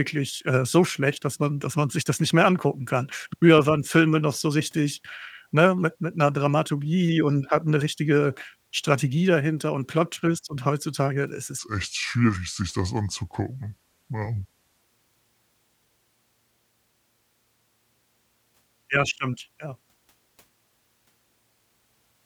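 Speech, with a section at the wrong speed from 11.59 to 14.82 s: it plays at 0.75x, so pitch falls roughly five semitones and the voice turns deep and sluggish. The likely cause is that stretch being clocked at the wrong rate in editing or playback.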